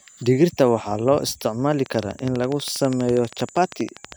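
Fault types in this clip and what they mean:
Train of clicks: A regular ticking starts just after "loo isticmaali", at 1.86 s, and runs to 4.13 s. About thirty similar clicks arrive at 12.4 per second, peaking about 5 dB above the speech. Interference or an unstable interface is the likely cause.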